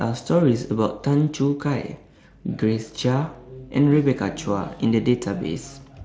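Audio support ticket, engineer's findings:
No fault found in the speech audio; no component or mechanism to report in these findings.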